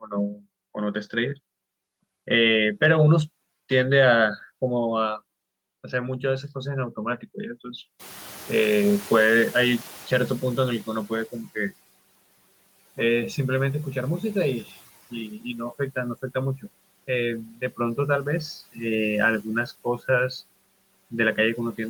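From 7.99 s the noise suppressor is catching up: room noise passes under-reduced, then sinks about 11 dB by 11.38 s as the estimate adapts.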